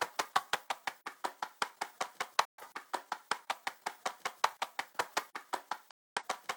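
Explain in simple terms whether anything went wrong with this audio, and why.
The receiver briefly lost the broadcast signal twice, a fault called a digital broadcast dropout. When incoming data arrives damaged, the receiver mutes rather than play garbage, then resumes once good data returns. Here the sound fades out almost instantly and goes silent from 2.45 to 2.63 s, and again from 5.91 to 6.23 s. The second gap is about twice as long, which fits roughly twice as many lost frames. Whatever was sent during those gaps is gone.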